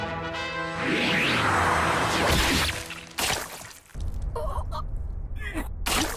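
No technical faults are audible anywhere in the recording.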